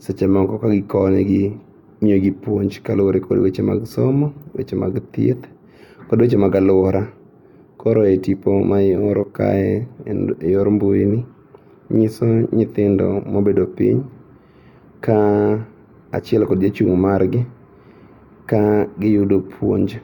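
No technical faults are audible anywhere in the speech.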